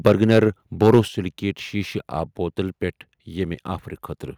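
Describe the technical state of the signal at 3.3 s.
At 3.3 s the speech signal is intact, with no fault to be heard at that moment.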